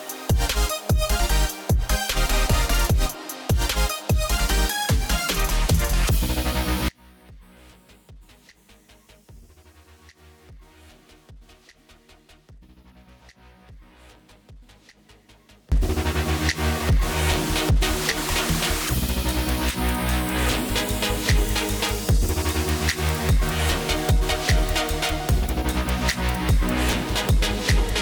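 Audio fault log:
6.89–15.72 s, audio dropout to a faint residue: the sound cuts off abruptly and returns just as suddenly about 8.8 s later, with only a faint leak of it, roughly 25 dB down, left in the gap. The likely cause is the signal being lost upstream while the path after the break stayed live.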